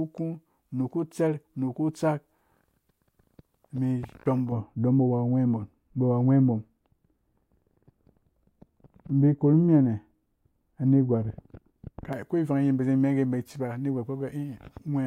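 From 4.52 to 12.13 s, de-emphasis applied wrongly cuts treble by about 11 dB at 10 kHz, dulling and muffling the speech until "ko ivan yim bazi".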